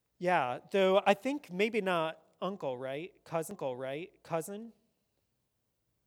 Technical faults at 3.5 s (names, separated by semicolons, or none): CD skip